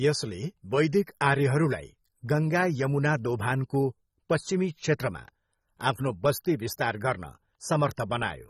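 AAC compression damage runs through the whole of this speech clip, with nothing above 15.6 kHz and a plainly audible dull, smeared, fizzy texture, which fits a low bitrate around 24 kbps. The likely cause is AAC-LC coarsely quantising spectral lines and dropping the top band.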